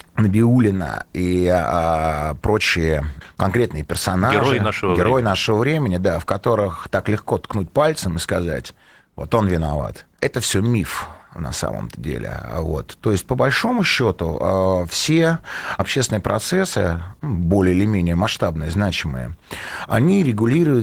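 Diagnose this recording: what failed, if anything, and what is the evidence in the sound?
Opus voice compression throughout, a codec-stage fault: plainly audible hoarse, slightly robotic coarseness, which fits hybrid SILK-plus-CELT coding near 16 kbps quantising the excitation coarsely.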